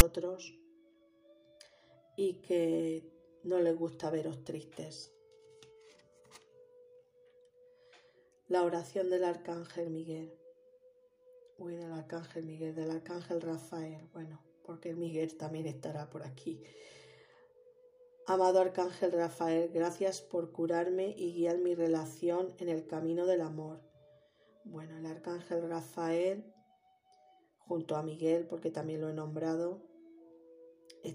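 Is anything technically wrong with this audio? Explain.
Yes. At 0.00 s there are file tags played as audio: the player has read a block of text metadata at the head of the file as if it were sample data. Because text bytes cluster in a narrow range of values, they decode as a waveform pushed off centre rather than balanced around zero. The result is a loud, very brief rasp offset to one side, a hard-edged click of static before the real sound begins.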